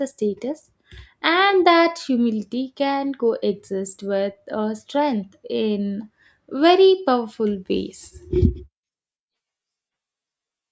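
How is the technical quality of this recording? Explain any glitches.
There's nothing to flag here: the speech comes across steadily with no dropouts, clicks, distortion or other glitches anywhere in the recording.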